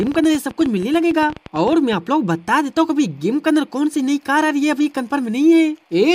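Likely electrical interference or a struggling interface injects a train of clicks from 0.00 to 1.94 s: about twenty similar pulses at an irregular 11.4 per second, peaking about 5 dB above the sound. They come across as an uneven ticking and popping on top of the audio.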